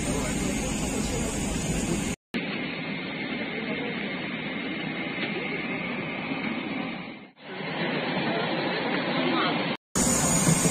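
At 2.14 s the audio drops out for about 200 ms. It returns dull and boxy, with nothing above 4.4 kHz, a few dB quieter, over a faint new noise floor. This lasts until 9.96 s. The likely cause is the input switching to a poorer device.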